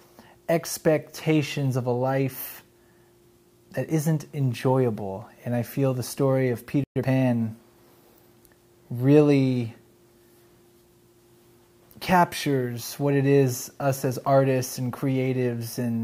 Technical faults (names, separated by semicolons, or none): playback stall; time-compressed catch-up